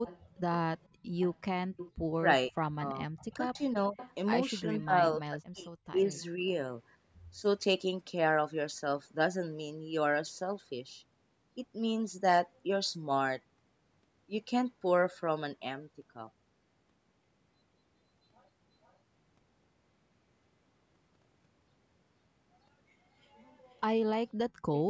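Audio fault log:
0.05–1.91 s, 3.18–4.14 s, 5.87–6.24 s, 18.83–18.93 s and 23.77–23.81 s: echo leak. A delayed second copy of the speech trails the direct sound by about 0.47 to 0.49 s. It is loudest in the first stretch, about 15 dB below the speech, then about 20 and 25 dB down, and only a faint trace about 40 dB down in the two short late events. This is likely a far-end loudspeaker's output reaching its microphone and escaping that side's echo canceller. The steady delay points to a fixed acoustic and network path.
0.9–2.1 s and 24.5–24.63 s: background gated by the echo canceller. The room sound is pulled down abruptly and then returns. In the first window the dips total around 400 ms and reach about 17 dB. The late dip is brief, around 150 ms, but deeper at about 32 dB. The gating coincides with loudspeaker activity, so the canceller clamps the microphone path and releases it once playback stops, which heard as the background ducking out and back.
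2.48–6.44 s: speech suppressed in double talk. The talker's level drops in pieces across this window, about 2 s in all, with the deepest cuts reaching roughly 35 dB. The overlap with the leaked echo at 3.18–4.14 s and 5.87–6.24 s shows both sides active at once. The canceller, likely unable to separate local speech from loudspeaker pickup, attenuates everything, so the loudspeaker side's voice breaks up while the other side talks.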